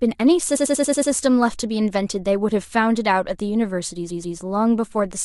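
From 0.55 to 1.10 s, repeated frames: a 93 ms block, consistent with four compressed frames being sent again, replays six extra times, giving a stutter and adding 0.56 s. From 4.09 to 4.37 s, a 129 ms block replays twice more, adding 0.28 s.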